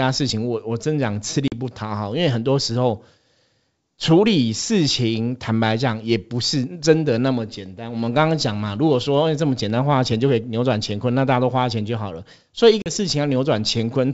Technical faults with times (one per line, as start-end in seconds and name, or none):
1.48-1.53 packet loss on an ADPCM call
12.82-12.90 packet loss on an ADPCM call